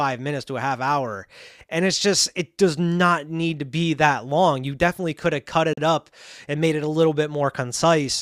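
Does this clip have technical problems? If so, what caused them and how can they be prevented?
Yes. A gap between stream segments cuts into the speech from 5.73 to 5.78 s, between "definitely could have cut" and "up and made it". The timestamps of two adjacent segments don't meet, so the player fills the missing 41 ms with silence. Nothing is lost; the sound simply resumes late. On a waveform it shows as a flat zero line with abrupt edges, and on a spectrogram as a clean, full-band vertical blank stripe. Its position fits segments about 4 seconds long. Writing each segment's start timestamp so that it exactly continues the previous segment prevents this.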